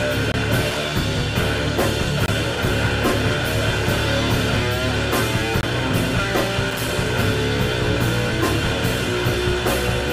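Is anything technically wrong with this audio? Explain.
Yes, there are two kinds of fault. Bluetooth dropout: at 0.32–0.36 s, 2.26–2.29 s and 5.61–5.64 s the sound cuts to silence for about 21 ms, fitting one lost packet. The cause is likely wireless packets arriving too late and being discarded. Loose connector crackle: at 0.70–0.78 s and 6.71–6.91 s, a worn contact making and breaking rapidly chops the signal into irregular scratchy crackle.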